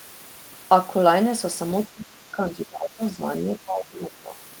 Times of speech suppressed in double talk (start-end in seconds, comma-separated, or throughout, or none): 1.87-4.38